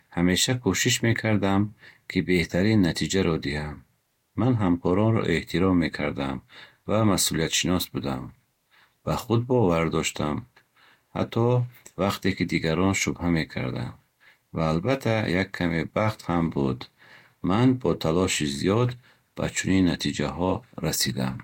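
No technical faults are audible.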